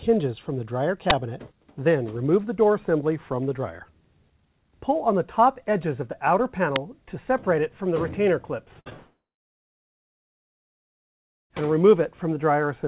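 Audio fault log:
1.10 s and 6.76 s, uninitialised buffer. Two short, loud bursts of digital noise. Leftover memory played as sound, fitting 512-sample and 128-sample buffers.
8.80–8.88 s, burst of packet loss. About 60 ms of audio is missing. The last sound is stretched and fades before the audio resumes further on.
8.90–8.93 s, short concealed packet loss. A brief smear where 20 ms never arrived. The receiver continued the previous sound, then blended back in.
8.97–11.63 s, long network dropout. The sound fades into about 2.3 s of silence. Roughly 2.5 s is lost, likely from a network outage.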